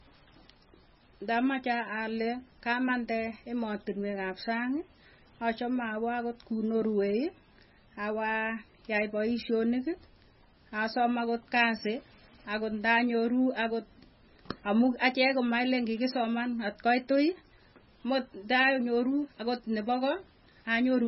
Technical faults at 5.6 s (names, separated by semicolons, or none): MP3 compression